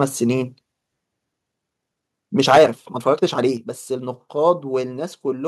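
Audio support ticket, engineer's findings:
Rushed delivery from 1.33 to 4.09 s with pitch unchanged; pace jumps about 1.43 times faster, then returns to normal. Time-stretched section, likely from processing that squeezed this span to fit a length by dropping short pieces while keeping pitch.

Harsh crackle on the loudest syllables, 2.48 to 2.64 s, peaks about 8 dB over the limit with roughly a tenth of samples flattened; again briefly at 4.48 to 4.50 s, right at the converter limit, few samples affected. Microphone overload, likely from input gain set high enough that peaks hit the converter ceiling and had their tops cut off.

Sudden level drops in sound and background together: about 4 dB at 2.58 s, inside the first distorted burst, then about 5 dB at 3.57 s. Microphone volume stepped down, likely the call software reacting to the clipping by lowering device input gain in single steps.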